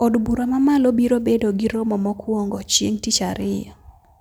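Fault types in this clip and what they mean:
No fault types are present in this clip.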